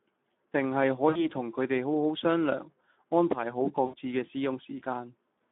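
Throughout, the speech sounds hoarse and grainy, squeezed into a narrow telephone band of roughly 200 Hz to 3.6 kHz. This is plainly audible Speex codec damage: too few bits for the excitation signal, which fits a bitrate around 11 kbps.

From 1.09 to 1.27 s, and again from 3.85 to 3.95 s, the speech smears into a buzzy tone or coloured noise that fades before recovering weakly. This is VoIP packet loss concealed by the speech codec. About 60 ms and then 80 ms of audio went missing, which points to three and four lost frames. The decoder extended its last pitch and filter with falling gain until real packets returned.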